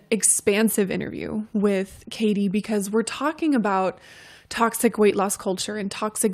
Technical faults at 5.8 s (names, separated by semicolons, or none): none